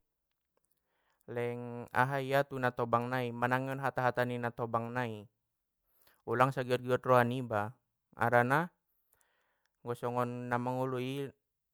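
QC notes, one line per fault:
No fault can be heard anywhere in the clip. There is nothing to log.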